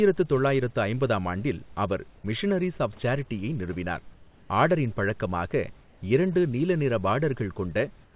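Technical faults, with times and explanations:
4.14–4.50 s and 8.04–8.16 s, comfort noise in place of the background: After "மிஷனரீஸ் ஆஃப் சேரிட்டியை நிறுவினார்" the real room noise gives way to a flat, featureless hiss for 360 ms, until "ஆர்டரின் பழக்கமாக இரண்டு நீல". The clip's last 120 ms does the same. The hiss is about 1 dB quieter in the first gap and about 3 dB quieter at the end. This is likely the sender's discontinuous transmission. The receiver fills the pauses with synthetic noise, band-limited to 4 kHz like the rest of the call.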